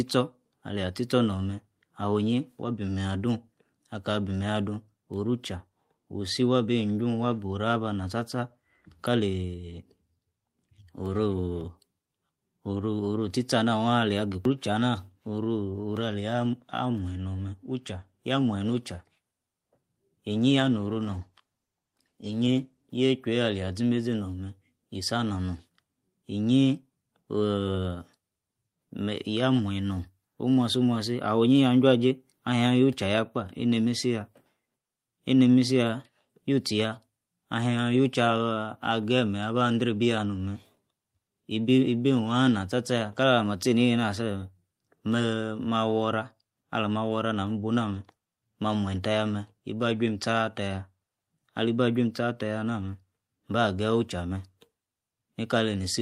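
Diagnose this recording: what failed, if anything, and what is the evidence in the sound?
A call bitrate drop in the codec and network stage: from 20.34 to 22.89 s the speech turns coarse and muffled, which fits the encoder falling from 32 to 14 kbps.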